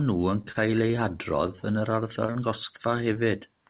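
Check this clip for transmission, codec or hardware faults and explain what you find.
Yes, there are transmission faults: a burst of repeated packet loss, one late-packet stall, and three short concealed losses. The audio is band-limited with nothing above 4 kHz, which fits a narrowband G.711 mu-law call path at 64 kbps.

Repeated packet loss (robotic sound) runs from 0.42 to 0.99 s. Four gaps occur in that stretch, the longest 27 ms. The receiver bridged about 65 ms in total by extending the last sound, and about 20 ms of real audio is gone. Because the patches come in quick succession, the speech turns choppy through this span.

A short stall from a late packet occurs at 1.56 to 1.60 s. One packet arrived about 22 ms behind schedule, draining the jitter buffer. The receiver held the current sound for 22 ms until the packet showed up, then resumed where it left off, so no audio is lost. 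What you hear is a brief unnatural hold on the sound, with a faint buzz or dip as it is stretched.

Short concealed packet loss occurs three times: 2.26 to 2.32 s, 2.33 to 2.37 s, and 3.13 to 3.17 s. Each event dropped 20 ms of audio, which the decoder replaced with 21 to 23 ms of synthesised continuation before crossfading back into the real signal. The first event runs slightly longer than the gap it replaced. Each one comes across as a quick smear or wobble.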